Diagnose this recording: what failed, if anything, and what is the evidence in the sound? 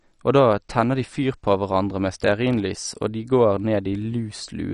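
Codec stage, likely MP2 compression: throughout, nothing survives above 11.3 kHz, and bit-starved sub-bands flicker into granular gurgling, unlike a clean low-pass filter. This fits a bitrate near 48 kbps.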